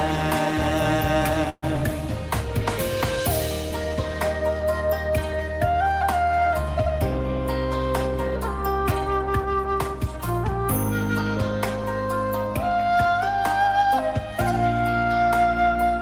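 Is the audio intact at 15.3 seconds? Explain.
Yes, at 15.3 seconds the audio plays through cleanly, with no dropout, click, distortion or other fault at that moment.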